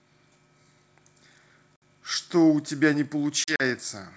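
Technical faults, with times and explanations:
1.76 to 1.83 s, packet loss on an ADPCM call: a hard-edged hole of about 60 ms, roughly three packets' worth, filled with silence. The decoder's predictor and step size drift out of step with the sender's, so the sound comes back with a bit of grit before settling.
3.44 to 3.62 s, packet loss on an ADPCM call: about 80 ms lost in short gaps spread over 160 ms, none longer than 40 ms, so the sound stutters.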